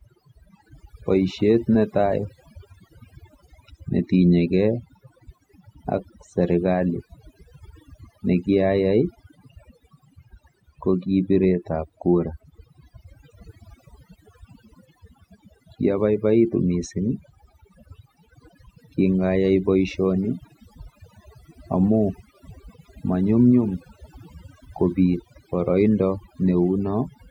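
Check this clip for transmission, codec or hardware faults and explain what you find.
One fault runs through the whole recording: overdone noise removal. A noise reduction stage was set much too hard. It mutes any frequency band close to its noise estimate, and soft parts of the speech go too. Gaps sink to near silence with twinkling specks.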